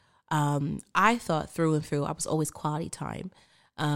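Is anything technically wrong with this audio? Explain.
Yes. Right after "and through I was", from 2.33 to 2.94 s, there's a drift correction step: speech runs about 5.8% fast, roughly a semitone sharp, then snaps back. That's likely clock-matching software jumping its playback rate to rebalance a buffer.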